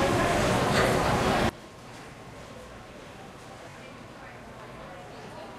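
A recording of sounds with a sudden gain jump at 1.49 s: the level drops by about 20 dB in a single step and stays down to the end, background noise included, which likely comes from a gain setting applied instantly instead of ramped.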